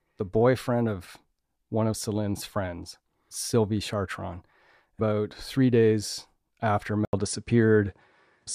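Speech, where the input likely switched to a poorer device at 7.05 s, after "three days after": an 80 ms gap, then nothing above 10.4 kHz, a small level shift and faint new noise.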